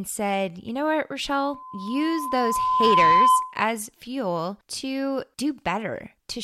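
From 1.30 to 3.60 s, after "know what" and before "fuel to", loudspeaker feedback squeal: loop gain exceeds one at 1 kHz, so a pure tone swells over about two seconds to roughly 10 dB above the speech, a bright horizontal line on a spectrogram.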